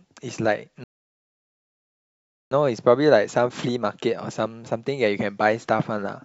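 At 0.84 s the speech halts in a rebuffering stall: the player exhausted its downloaded audio and waited until 2.51 s, adding about 1.67 s of silence before resuming exactly where it stopped. On a waveform and spectrogram this appears as a flat, empty gap.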